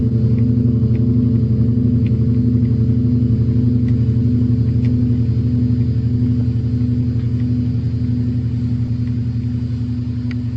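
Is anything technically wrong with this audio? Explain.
Yes. There is clock drift between sender and receiver: the sending end's audio clock runs about 4% slow relative to the receiver. The jitter buffer therefore keeps draining, and the receiver has to compensate across the whole clip. The result is small timing hiccups recurring at uneven intervals from start to finish.

Repeated timing corrections run from 0.17 s to 10.47 s. To keep pace with the slower sender, the receiver repeatedly stretches the audio by repeating short pieces, all in the same direction and unevenly spaced, so the material plays at 96% speed and gains roughly 0.4 s in total. Each edit is small, heard, if at all, as slight hiccups or an unsteady tempo rather than as clear breaks. The call path itself, which fits a 32 kbps Opus link, limits the audio to about 8 kHz.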